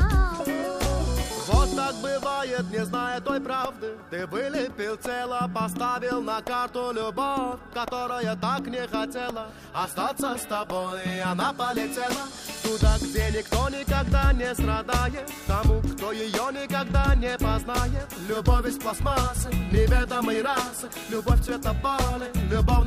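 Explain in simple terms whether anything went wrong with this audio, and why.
Nothing went wrong here, since there's no glitch, dropout or other technical hiccup anywhere in the recording to point to.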